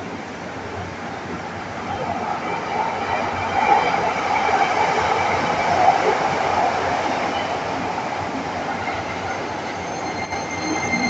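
Near the end of the audio, from 10.25 to 10.32 s, the level falls abruptly by about 6 dB and recovers. The likely cause is one channel dropping out before the mono sum. Unlike a gain dip, the drop is a step change, not a fade.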